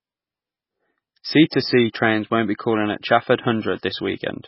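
Throughout, the speech sounds watery and swirly with smeared consonant onsets, the likely result of heavy MP3 compression at a starved bitrate, which fits roughly 16 kbps. A spectrogram shows a hard ceiling at 5.6 kHz and flickering, patchy upper bands.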